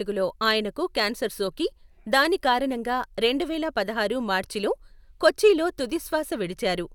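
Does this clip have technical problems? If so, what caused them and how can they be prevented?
No, the speech signal shows no audible technical faults anywhere in the recording, so there is nothing here that needs preventing.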